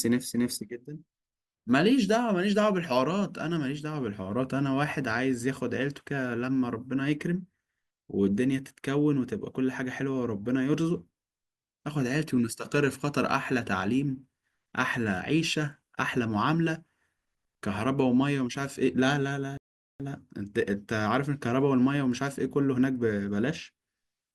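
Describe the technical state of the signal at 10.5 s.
At 10.5 s the speech signal is intact, with no dropout, distortion, glitch or other technical fault at that point.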